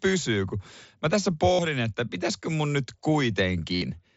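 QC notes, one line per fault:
1.53–1.59 s and 3.75–3.82 s, concealed Bluetooth headset packet loss: headset packets dropped for about 52 and 68 ms, and the receiver filled each gap by repeating the best-matching recent stretch of the mSBC-coded wideband signal. This gives a held buzzy tone at full level and a slight warble as real audio resumes.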